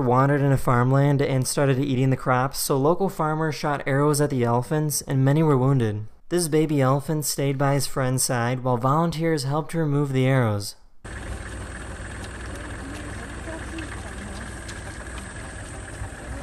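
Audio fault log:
No faults can be heard anywhere in this clip. Nothing in the audio calls for an entry in the log.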